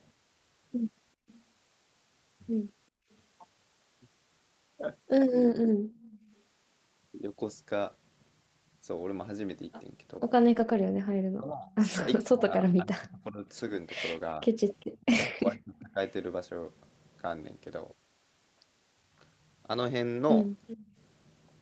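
Speech carried over an Opus call path band-limited to 8 kHz shows background gated by the echo canceller between 1.15 and 6.29 s, at 14.86 to 15.05 s and at 20.79 to 20.96 s. The room sound ducks while the far-end loudspeaker plays, by about 26 dB at most in the first stretch (roughly 0.7 s in total) and by about 14 dB and 15 dB in the later two. Echo leak accompanies these spans, at 1.28 to 6.36 s, 14.8 to 15.81 s and 20.67 to 20.81 s: a copy of the voice trailing by 393 ms, about 30 dB below the speech, rising to about 15 dB below it in the last burst, likely from incomplete cancellation of the loudspeaker signal. From 10.2 to 15.98 s, speech suppressed in double talk makes the talker dip by around 25 dB in pieces totalling about 2 s, likely because the canceller confused overlapping speech with echo. Lost packets rebuilt from error correction give gapless but rougher, noisier audio at 10.53 to 10.75 s (120 ms, which fits six 20 ms packets) and at 13.57 to 13.59 s (20 ms).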